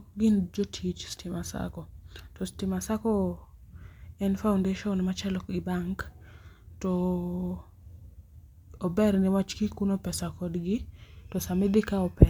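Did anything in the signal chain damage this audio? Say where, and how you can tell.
No, nothing in this speech recording points to damage at any stage of the chain.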